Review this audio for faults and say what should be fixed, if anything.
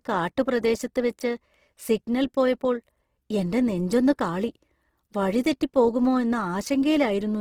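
Opus compression runs through the whole speech clip, with plainly audible damage. Bandwidth stays full, but voiced sound is grainy and rough, with a noisy texture where tonal detail should be. That fits the codec's music-oriented CELT mode running short of bits, likely at around 16 kbps, and filling starved bands with folded or noise-like content instead of leaving gaps. To prevent it, encode at a substantially higher Opus bitrate or keep an uncompressed source.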